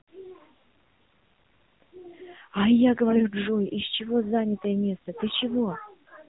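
The whole clip runs through the AMR narrowband mobile codec. Everything above 4 kHz is gone, so the speech sounds boxed-in and phone-like. The voice model is starved of bits, which makes it plainly buzzy and synthetic and fits a low mode around 7.4 kbps.

From 3.10 to 3.26 s there's a burst of AMR bit errors. It sounds like roughly one bit in ten in the weakly protected parts of a handful of frames got flipped, so the excitation pulses and fine parameters land wrong. Pitch and level hold, but the voice turns hoarse and gargly.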